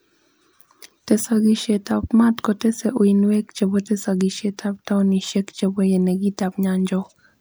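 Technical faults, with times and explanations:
No technical faults can be heard anywhere in the speech recording. There is nothing to mark with a time or explain.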